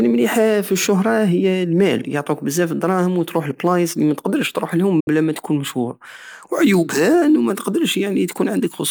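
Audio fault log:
5.00–5.08 s: digital broadcast dropout. Right after "الدراهم وتروح لبلايص متقدرش" the speech fades out over 8 ms into a 64 ms hole of silence, resuming at "بلا ماتكون مشهور وعيوبها". The receiver muted on bad frames, which fits two lost frames, so that stretch is gone.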